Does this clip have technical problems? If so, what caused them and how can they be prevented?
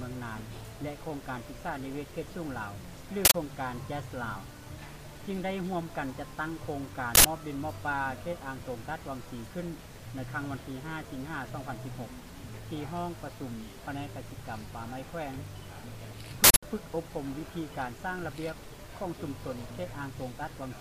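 Yes: harsh bursts of digital noise at 3.25 to 3.34 s, 7.15 to 7.25 s and 16.44 to 16.63 s come from an uninitialised buffer. Stale memory played as sound; the 93 ms bursts fit a 4096-sample buffer and the 186 ms one a doubled block. To prevent it, clear every buffer to silence before playback and never output a block until audio has actually been written into it.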